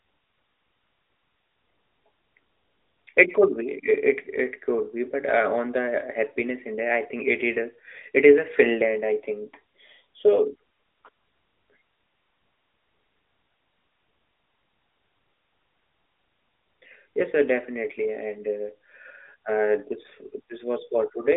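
No technical faults can be heard anywhere in this speech. It comes through the AMR narrowband mobile codec, with the sound confined to a telephone band of roughly 300 Hz to 3.6 kHz, nothing above 3.7 kHz, and only light coding texture, which fits the codec's 12.2 kbps top mode.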